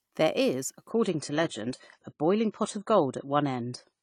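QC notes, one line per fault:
0.90 s to the end: adaptive stream at a lower bitrate. The sound switches abruptly to a duller, lower-quality version, with no gap. Nothing remains above 10 kHz, and codec artefacts rise. This points to a drop from about 96 to 24 kbit/s AAC.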